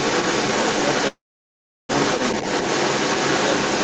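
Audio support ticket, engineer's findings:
Other side's voice leaking through, 0 to 3.8 s, whole clip. Far-end talker audible over ours, even sitting slightly above it, about 5 dB hotter. Likely the echo canceller on the loudspeaker device isn't removing playback from the mic signal.

Call audio freeze, 1.07 to 1.91 s. Sound stretches into a fading buzz, then roughly 0.7 s of dead air, then picks up exactly where it stopped with nothing lost. Likely jitter buffer ran dry while packets were held up, adding about 0.8 s of delay.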